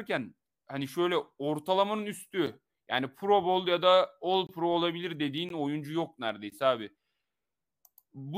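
Speech, with a gap between stream segments heard four times: at 2.46 s after "hani şöyle ortalamanın", 4.47 to 4.49 s, 5.49 s before "oyuncu yok", and 6.50 s. Each is a hard-edged silent hole of 7 to 23 ms. They fall on one-second segment boundaries, where mismatched time stamps leave spaces filled with silence. No audio is lost.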